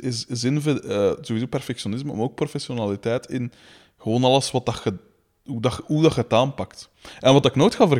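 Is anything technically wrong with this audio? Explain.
No, nothing technically wrong can be heard anywhere in this recording.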